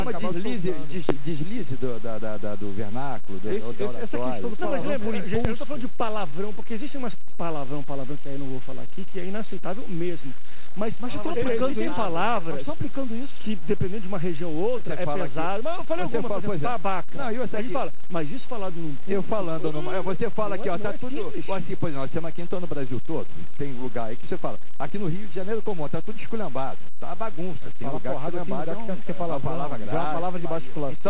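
A sudden voltage step, likely from a plug, switch, static discharge or driver glitch, entered the signal twice. At 1.09 to 1.13 s it comes through as a sharp loud pop standing roughly 10 dB above the surrounding sound, and at 5.45 to 5.49 s a second, weaker pop rises about 5 dB above it. Each is a single impulse of about 40 ms that the downstream circuitry has shaped, and the underlying audio continues beneath both.

At 28.86 s, about 20 ms of audio from the call never reached the decoder in time. This is short concealed packet loss: the receiver bridged the hole with roughly 22 ms of synthesised continuation and then blended back into the real signal, leaving a brief smear or wobble. The call codec's band limit, with nothing above 4 kHz, fits a narrowband telephone codec such as G.711 and shapes the sound on both sides of the gap.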